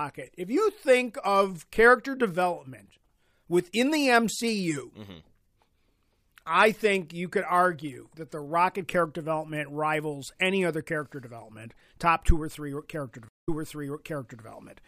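A speech clip with a stream reconnect at 13.29 s: the sound cuts to 176 ms of silence, then resumes about 0.98 s earlier, replaying audio already heard until 14.45 s. That backward jump, from a server resending a burst after the connection dropped, separates it from a plain dropout.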